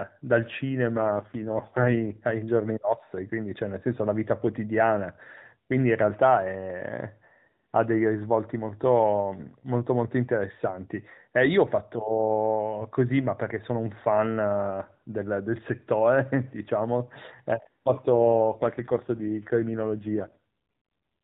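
From 0.96 to 2.19 s, and again from 18.10 to 20.39 s, the speech turns rougher, buzzier and more synthetic, then recovers. The band stays the same, limited to 4 kHz by the narrowband mobile codec, and there is no gap. This is an AMR rate drop. The network pushes the codec down to a leaner mode, which fits a step from 12.2 to 4.75 kbps, so fewer pulses are left to model the voice.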